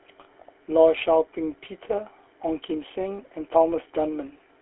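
From start to finish the speech carries GSM full-rate codec damage, and it is plainly audible. The codec rebuilds the voice from a vocal-tract filter fed by a sparse, regularly spaced pulse train, which gives a buzzy, gravelly roughness. The band is held to a telephone line of about 300 Hz to 3.4 kHz. On a spectrogram nothing appears below 300 Hz or above 3.4 kHz, and the harmonics look smeared and grainy rather than cleanly striated.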